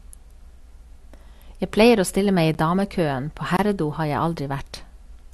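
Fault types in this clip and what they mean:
Block of digital silence: the speech drops to silence with no fade, a 10 ms tick at 2.54 s and a 25 ms hole from 3.57 to 3.59 s.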